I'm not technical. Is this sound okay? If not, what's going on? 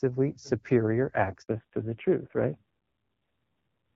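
No. At 1.42 s there is a handover gap: the call switched between networks and nothing came through for 60 ms, so the speech cuts out briefly until 1.48 s. Unlike a dropout from a bad signal, it happens just once and is followed by a lasting change in sound.

That change is a fallback to narrowband. From 1.48 s to the end, the call drops from HD Voice to an older, lower-quality phone codec, so everything above 4 kHz is missing. The speech sounds duller, boxier and rougher. Unlike a brief glitch, this doesn't recover.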